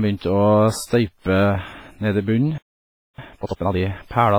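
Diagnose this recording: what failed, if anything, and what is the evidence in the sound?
Codec stage: the speech carries heavy transform-codec damage throughout, with ringing, a washy smear and a hiss that swells and falls with the voice. The character likely points to WMA compression at a low bitrate, consistent with about 24 kbps. Long transform blocks spread quantisation noise over tens of milliseconds, and weak spectral lines are zeroed. A spectrogram shows blotchy, gappy high bands and noise smeared around onsets.

Playback or buffer stage: a playback stall cuts the speech off mid-flow at 2.58 s, and the sound returns at 3.18 s, a gap of about 0.6 s. The likely cause is the player running out of data or its thread being blocked. On the waveform this is a flat silent stretch, and on the spectrogram a blank vertical band, with the sound stopping abruptly rather than fading.

Playback stage, recovery: from 3.18 to 3.78 s the player works off its backlog with time-compressed catch-up, running the speech at 2.0 times speed at normal pitch. 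It does this by cutting out short pieces and cross-fading across the joins. The passage sounds hurried but not raised in pitch. A spectrogram shows syllables packed closer together with harmonic spacing unchanged, and the waveform shows compressed envelopes with tight splice points.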